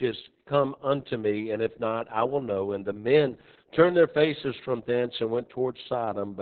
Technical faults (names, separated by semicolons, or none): Opus voice compression